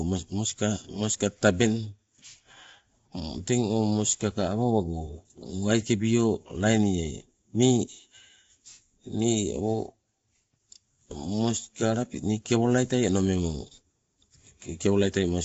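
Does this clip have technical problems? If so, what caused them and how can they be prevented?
Yes. The speech sounds rough and grainy throughout, with nothing above 7.7 kHz. This is likely low-delay AAC compression, which fits AAC-ELD at around 24 kbps. Prevent it with a higher bitrate.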